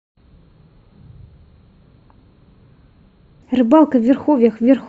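A speech recording whose opening, from 0.0 to 3.42 s, sounds deep and dragging, roughly ten semitones low: a section at the wrong speed, likely played at 0.579 times its recorded rate.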